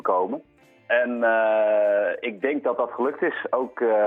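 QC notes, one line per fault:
No faults found. Nothing in this clip needs a QC entry.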